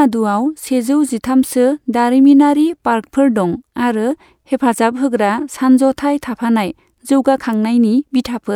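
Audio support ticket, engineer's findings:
No faults found in the audio; nothing to trace to a component.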